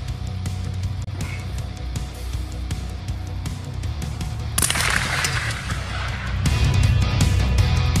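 At 1.04 s the audio drops out completely and returns at 1.08 s, leaving a gap of about 40 ms. This is likely a Bluetooth dropout: a packet failed to reach the headphones in time and was discarded, so the output stayed silent until the next good packet arrived. The missing stretch fits a single lost frame of roughly 23 ms of audio. When sound returns, it picks up further along, as though playback had continued through the gap.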